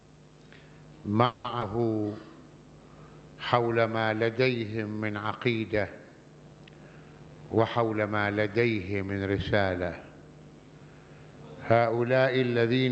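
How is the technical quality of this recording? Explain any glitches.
The recording has three call-transmission glitches, all in audio carried over a call codec whose band stops at 8 kHz.

From 1.25 to 1.46 s there is a call audio freeze. The last sound is stretched into a fading buzz or hiss for 190 ms, likely because delayed packets drained the jitter buffer. Playback then resumes without losing anything.

From 1.60 to 1.63 s a short concealed packet loss appears as a brief smear. About 40 ms of audio never arrived, and the decoder patched the hole by extending the preceding sound.

From 6.96 to 8.10 s a jitter buffer speed-up plays the audio at 116% speed with unchanged pitch. The receiver trimmed roughly a fifth of a second of pitch periods to reduce the accumulated delay.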